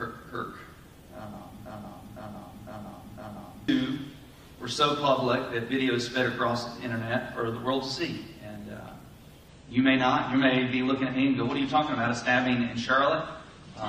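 From 1.66 to 3.68 s a broken-record loop repeats a 0.51 s fragment exactly four times, likely a stalled player resending its last buffer, unlike a stutter, which varies.

From 9.48 s onward an adaptive stream at a lower bitrate cuts everything above 9 kHz without any gap, its sudden, sustained dulling suggesting a drop from around 96 to 32 kbit/s rather than a dropout.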